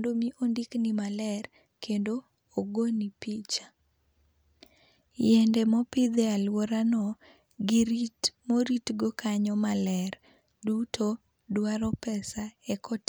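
No technical faults are audible anywhere in the recording.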